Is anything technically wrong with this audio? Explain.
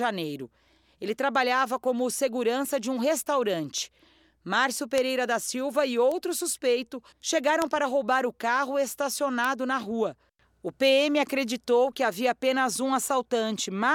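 Yes. Four bit error spikes occur in this speech, at 4.98, 6.12, 7.62 (just before "para roubar o carro") and 9.45 s (just before "na rua"). A flipped bit makes one to three samples jump to about -8 dBFS, or about -14 dBFS at 6.12 s. Each gives a sharp, broadband tick unrelated to the voice.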